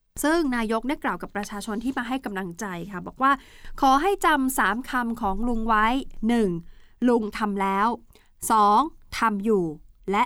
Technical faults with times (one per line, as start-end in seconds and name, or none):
none